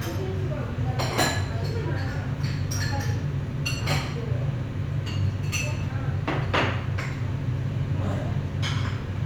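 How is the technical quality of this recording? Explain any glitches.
Nothing here calls for explanation: the sounds on this recording come through steadily, with no glitches, dropouts or odd jumps anywhere along the way.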